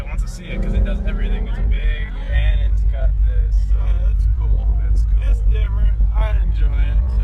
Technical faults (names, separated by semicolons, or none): time-stretched section